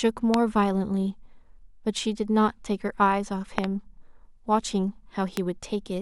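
Sharp loud pops cut through the speech three times: a single one at 0.34 to 0.36 s, a quick double pop from 3.58 to 3.66 s, and another single one at 5.37 to 5.39 s. Each jumps some 20 dB above the speech, which carries on underneath. The likely cause is a sudden voltage step or pulse, from a plug, switch, static discharge or driver glitch, entering the signal path, where later circuitry shapes it into a brief thump.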